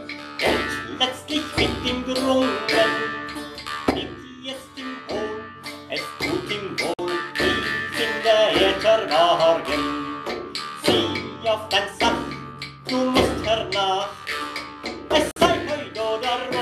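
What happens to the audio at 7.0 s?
Just before 7.0 s, from 6.94 to 6.99 s, there is a digital broadcast dropout. The receiver stopped getting usable frames and muted its output, with a fade of about 3 ms, until good frames resumed. About 48 ms of sound is lost, which fits two missing frames. It is heard as a brief, clean gap. On a waveform it appears as a short flat line, and on a spectrogram as a narrow vertical band of silence across all frequencies.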